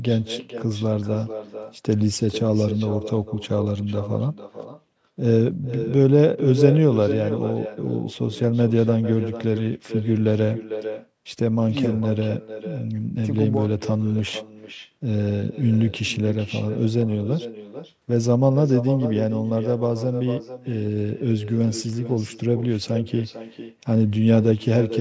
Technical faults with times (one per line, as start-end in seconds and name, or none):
0.00-25.01 echo with no canceller